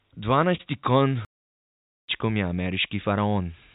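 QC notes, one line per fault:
0.56 to 0.61 s, short stall from a late packet: a packet showed up late, so the last bit of sound gets held for about 30 ms with nothing lost, just a slightly stretched moment.
1.25 to 2.08 s, playback stall: the sound drops to silence mid-flow for about 0.83 s, then carries on, likely because the player ran dry or its thread got blocked.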